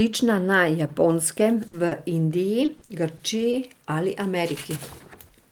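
At 1.67 s the speech briefly turns into a held, fading sound before resuming at 1.75 s with about 60 ms of audio missing. This is a burst of packet loss: several consecutive packets were lost or arrived too late, and the receiver stretched and faded the last sound across the hole.

A moment later, from 1.87 to 1.93 s, there is a quick smear that wipes out roughly 40 ms. This is short concealed packet loss. The decoder patched the brief hole by extending the preceding sound and then blending back into the real signal.

Between 2.65 and 3.55 s the speech goes choppy and robotic, with five separate dropouts of up to 40 ms each, totalling 140 ms, about 16% of that stretch. This is repeated packet loss. Each gap is patched by continuing the previous sound before the next gap arrives.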